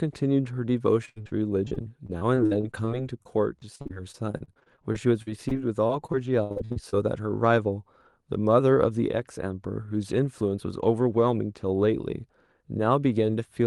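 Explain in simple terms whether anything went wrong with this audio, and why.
From 1.05 to 6.94 s the speech turns choppy and robotic, with dozens of tiny dropouts up to 68 ms long. This is repeated packet loss: data kept going missing on the call, and each hole was patched by stretching the previous sound.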